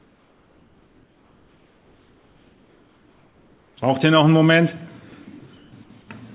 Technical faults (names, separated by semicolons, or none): comfort noise in place of the background; sound dropped by the voice detector